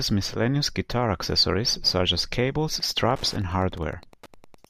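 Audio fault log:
2.74–4.70 s, Wi-Fi interference: a nearby Wi-Fi radio's beacon, sent every 102.4 ms, is picked up and rectified by the audio circuitry, laying a steady ticking at roughly ten per second under the speech, about 25 dB below it, until the clip ends.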